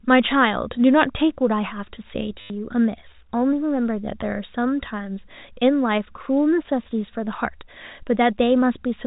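A speech recording, and there's a packet loss with last packet repeated from 2.41 to 2.5 s: about 90 ms went missing and the receiver kept replaying the last packet it had. The run turns into a brief robotic buzz, which fits 10 ms packets repeating at 100 Hz. The telephone-band G.711 coding underneath is still audible as the usual 4 kHz ceiling.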